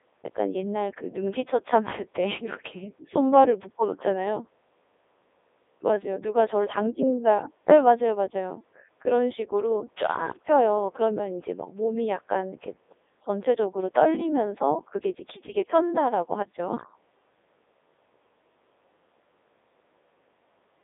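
From start to end the speech passes through a Codec 2 vocoder, its damage consistent with the 3.2 kbit/s mode. Only pitch, voicing, energy and envelope survive, resynthesised from sine waves, so it sounds robotic and buzzy, confined to about 300 Hz to 3.7 kHz, with nothing above 3.8 kHz.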